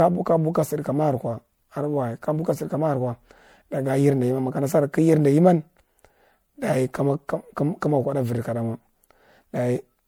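Generation loss runs throughout the speech, likely from the audio being encoded to MP3 and decoded again a few times, at a quality that fits a 96 kbit/s chain. Each pass quantises the signal on a shifted frame grid, so the errors stack rather than repeat. The result is a swirly, hollow, smeared texture beyond what one encode at that rate would leave, with consonant attacks softened and blurred, while content still reaches about 20.9 kHz.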